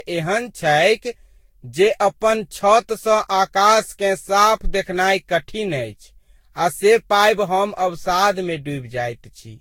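Right through the speech there's a swirly, hollow smear with blurred attacks and nothing above 16.6 kHz, likely generation loss from around seven passes through a lossy codec.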